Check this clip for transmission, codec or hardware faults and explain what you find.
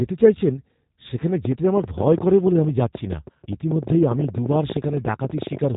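Two faults are audible: plainly audible low-rate speech coding across the whole clip, and a burst of clicking from about 1.5 s to the end.

G.729 codec, throughout: the speech is rebuilt from a vocal tract model, pitch prediction and a few pulses per frame, which fits an 8 kbit/s G.729A coder. Nothing above 3.8 kHz survives, and the coding roughness is plainly audible as a dull, slightly synthetic voice.

Train of clicks, from 1.45 s to 5.76 s: about 70 sharp pulses of similar shape arrive at an uneven pace averaging 13.7 per second. They peak around 10 dB above the speech and tick through pauses too. The likely cause is electrical interference or a faulty connection or power supply.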